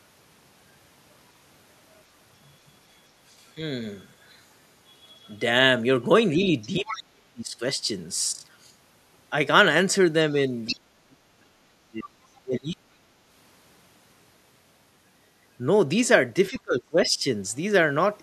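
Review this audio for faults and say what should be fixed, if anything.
Other side's voice leaking through appears in four brief scraps: 6.61–6.67 s, 6.87–6.98 s, 10.66–10.74 s and 16.55–16.6 s. Each sits roughly 10 to 30 dB below the talker. The likely cause is that the loudspeaker's output reached the microphone and the echo canceller left a residue. On a spectrogram, look for short, faint harmonic streaks that don't line up with the talker's own pitch track. Better acoustic isolation or a headset, plus a well-converged echo canceller, would prevent this.

Speech suppressed in double talk occurs at 6.8–7.61 s, 10.68–12.84 s and 16.5–17.25 s, overlapping the leaked scraps. The talker's level dips sharply there, by up to about 40 dB, 35 dB and 20 dB respectively. This likely happened because the echo canceller couldn't tell the talker from the echo and attenuated everything. The waveform shows gouged, gated envelope sections, and the spectrogram shows darkened bands. 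A canceller with reliable double-talk detection and gentler residual suppression would prevent it.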